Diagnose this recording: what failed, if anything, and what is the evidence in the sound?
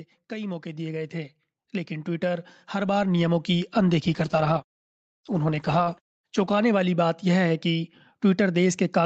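The automatic gain rising fault sits in the call processing stage. From 0.29 s to 3.77 s the level climbs steadily by about 12 dB, and the background noise swells along with the speech. That shared rise points to gain applied to the whole signal by the automatic gain control, not a talker moving closer to the microphone, which would lift the speech far more than the room.

The call bitrate drop is a codec-stage fault driven by the network. From 4.15 s to 7.95 s the speech turns rough and watery, and it is at its coarsest for about 2.45 s. The Opus path already tops out near 8 kHz, and the texture here fits the encoder being pushed from about 48 kbps down to around 11 kbps. Unlike packet loss, there are no gaps or repeated fragments. Unlike a simple low-pass filter, grainy coding noise appears along with the dulling.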